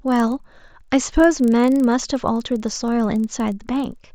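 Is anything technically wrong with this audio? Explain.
Yes, there's a resampler restarted on every block, and it runs through the whole speech clip. The converter handled each 40 ms chunk in isolation, so at every boundary it filled in silence or the wrong end of the chunk instead of the real neighbouring samples. That leaves a small glitch 25 times a second, heard as a regular ticking buzz riding under the speech and dropping out in the gaps. The character fits an upsample from 16 kHz to 48 kHz.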